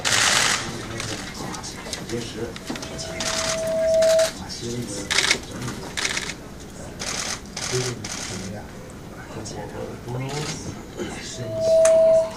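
At 2.60 s a loudspeaker feedback squeal starts. A microphone is picking up the speaker it feeds, and the loop gain tops one at 650 Hz. That single tone swells over about a second and a half to roughly 10 dB above the sound, then stops at 4.36 s. It returns at 11.33 s at the same 650 Hz. This time it rises much faster, in about 0.4 s, and louder, about 15 dB up. It lasts to the end.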